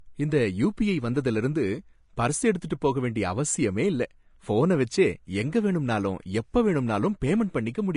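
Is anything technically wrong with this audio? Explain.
Yes. Throughout, there is plainly audible damage from likely Vorbis compression. Nothing is present above 10.5 kHz, and the coarsely quantised treble turns into grainy hiss, which fits a bitrate around 35 kbps. A simple low-pass filter would sound dull but clean, not rough.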